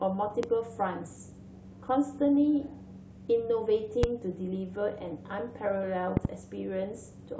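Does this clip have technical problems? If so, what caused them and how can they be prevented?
Yes. Loud pops: sharp thumps about 15 to 20 dB above the speech at 0.43–0.46 s and 4.03–4.06 s, and a double pop at 6.17–6.27 s, likely from voltage spikes from plugs, switches or static. Secure all connections, avoid switching equipment while recording, and ground gear to discharge static.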